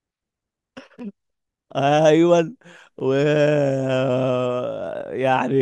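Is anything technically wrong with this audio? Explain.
Yes, there are overlapping chunks. At 1.0, 3.0 and 5.01 s, each new 2-second chunk starts about 7 ms before the previous one ends, so that sliver of speech plays twice at every join. You hear it as a regular click or stutter.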